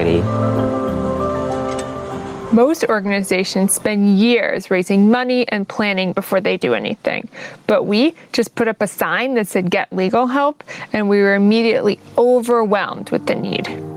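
Gain pumping runs through the whole clip. Loud and soft parts end up closer in level, and the sound is squashed. The level swings by around 15 dB. The likely cause is gain set far too high, with a fast limiter clamping down.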